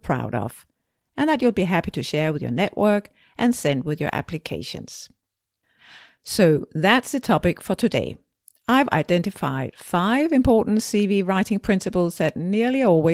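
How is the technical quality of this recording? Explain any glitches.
No glitches turn up anywhere in this speech recording, so there's nothing here that needs explaining.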